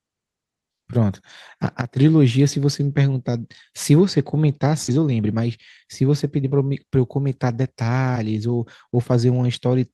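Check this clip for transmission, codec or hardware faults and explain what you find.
There are two transmission faults, both clustered around the middle of the speech.

At 4.87 to 4.89 s there's a skip ahead. Around 0.4 s of audio was thrown away, either lost in transit or dropped when the jitter buffer overflowed. Playback leaps straight past it with no filler, so the speech jumps abruptly and a chunk goes missing.

Right after, from 4.97 to 6.52 s, there's a jitter buffer speed-up. The buffer was still running long, so the receiver kept snipping out tiny pitch-period slices, roughly a tenth of a second in total. The speech plays about 7% faster at the same pitch and sounds a bit rushed.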